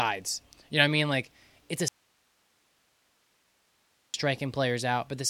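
Speech that cuts out abruptly right after "it's a" at 1.88 s and returns at 4.14 s, leaving about 2.26 s of faint hiss roughly 40 dB below the voice. This audio dropout to a faint residue likely comes from a signal loss upstream while the following chain stayed live.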